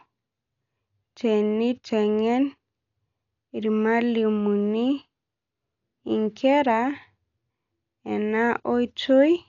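Throughout, the speech is dull, with rough, fluttering noise around tones. Heavy Dolby Digital compression is the likely cause. A spectrogram shows nothing above 6.9 kHz and speckled noise-filled gaps, consistent with a bitrate near 48 kbps.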